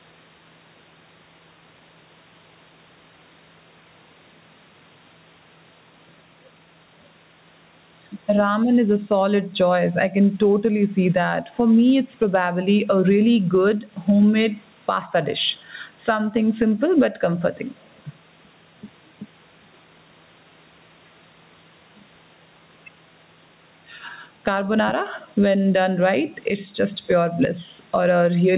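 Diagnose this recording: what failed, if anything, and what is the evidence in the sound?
Gain pumping throughout: the gain swings around 10 dB and loud and soft parts are squashed closer in level, likely excessive input gain hitting a fast call-processing limiter.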